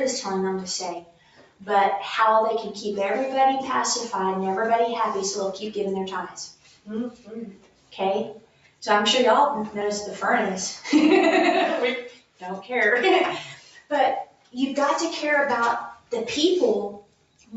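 A speech-tuned noise suppressor is running over this non-speech audio for the whole clip. It treats steady tones, ambience and decays as noise. So the level keeps swinging by something like 10 dB. Attacks pass through while sustained parts sink. The sound pumps and thins out. Everything sits below 8 kHz, as the call path limits it. The suppressor mistakes sound for noise and cuts it at 1.0 to 1.64 s, 6.53 to 7.94 s, 8.4 to 8.82 s, 12.12 to 12.7 s, 13.54 to 13.91 s, 14.25 to 14.54 s, 15.95 to 16.12 s and 17.01 to 17.53 s. Each dip goes about 12 dB below the surrounding level, or about 11 dB at 15.95 s. The longest spans around a second, near 6.5 to 7.9 s. Held sounds and tails fade early there.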